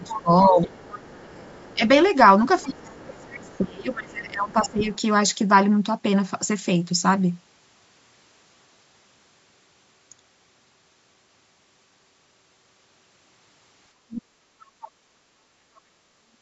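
Speech suppressed in double talk begins at 0.00 s and runs to 1.82 s. The talker's speech sinks by as much as about 30 dB, over roughly a second in total. The likely cause is that the echo canceller could not separate the near talker from the loudspeaker signal while both sides spoke, so it turned down everything it heard.

The other side's voice leaking through overlaps this from 0.02 to 3.94 s. A second voice sits about 20 dB below the talker, likely loudspeaker sound that the canceller failed to remove from the microphone.

Speech suppression returns from 2.64 to 4.81 s, with dips of about 20 dB across roughly two seconds, probably from the same double-talk confusion. The leaking voice reappears briefly from 4.64 to 4.98 s at about 20 dB down, again likely residual echo.

From 13.96 to 14.60 s the speech is suppressed hard, by up to about 40 dB over roughly 0.7 s, likely because both sides were active at once. 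A short scrap of the far voice follows at 14.81 to 14.90 s, about 25 dB below the talker and likely another echo remnant.

Background gated by the echo canceller runs from 14.92 to 15.93 s. The room sound behind the speech sinks by about 7 dB for roughly a second. While the loudspeaker played, the canceller clamped the microphone, and the room sound comes back once it releases.

A last double-talk suppression starts at 16.21 s and lasts to the end of the clip, cutting the speech by up to about 40 dB. The likely cause is again the canceller losing track of which signal belonged to the talker.

Throughout, the call's microphone processing leaves nothing above 8 kHz.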